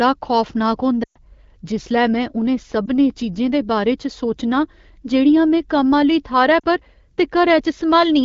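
Speech carried over an AMR wideband link has lost AMR speech frames at 1.03 to 1.17 s, 2.86 to 2.91 s and 6.59 to 6.65 s. The decoder stretches the last good pitch and vocal tract shape while fading it. The 120 ms gap drops to near silence quickly. The 20 ms and 40 ms gaps are brief dips.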